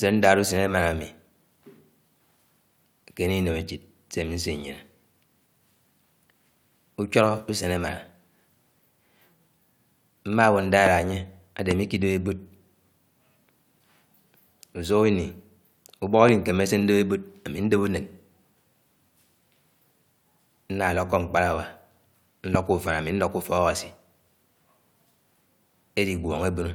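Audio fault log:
10.86–10.89 s, 11.71–11.73 s, 16.29–16.31 s, 22.55–22.57 s: loud pop, a single sharp crack each time, about 20 dB above the speech first, then about 15 dB, with talking continuing underneath; likely a brief voltage spike from a plug, switch or static.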